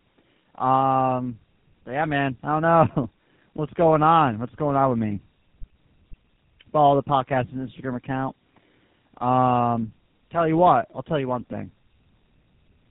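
Right through the clip you get tandem speech coding: the call passed through an AMR-NB coder, then a G.711 link, then GSM full rate, so two speech codecs each squeezed the previous one's damage. The speech comes out rough, muffled and warbly, with nothing above about 3.8 kHz.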